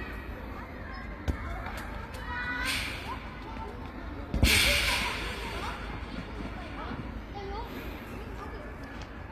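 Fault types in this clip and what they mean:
HE-AAC compression: The plainly audible damage is likely HE-AAC coding at a low rate, consistent with something near 24 kbps. The lower spectrum is coded directly, while the treble is rebuilt by copying lower bands upward under a coarse envelope. High-frequency detail therefore sounds gritty and metallic. A spectrogram shows a hard ceiling at 14.9 kHz, repeated block-like texture above the crossover, and harmonics that fail to align there.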